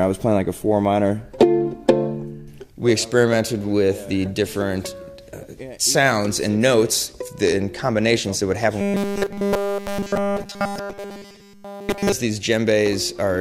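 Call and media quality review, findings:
Robotic sound from repeated short buffers, 8.81 to 12.12 s. Rigid metallic buzz at 200 Hz, essentially the whole stretch repeated. Likely cause: starved playout or jitter buffer repeating a 5 ms chunk while real audio is skipped. Spectrogram shows rigid harmonic stripes at 200 Hz multiples; waveform shows an identical 5 ms cycle tiling the segment.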